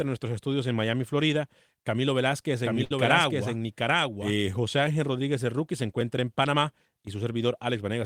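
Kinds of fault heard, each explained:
Doubled audio track: From 2.64 s to 4.33 s a second copy of the speech runs underneath the original, trailing by roughly 0.7 s and at about the same loudness. It has no reverberant tail or room colouring, and it cuts in and out abruptly at both ends, which gives a clean but confusing echo. The likely cause is the same signal reaching the mix twice, once through a slower capture path or through an edit that left two misaligned copies.
Short stall from a late packet: At 2.84 s the sound hangs for 62 ms, a held smear before the speech resumes at 2.92 s exactly where it left off. Nothing is skipped. A packet arrived late, the jitter buffer ran dry, and the receiver stretched the last audio to fill the gap. Playback then continued 62 ms behind its earlier timing.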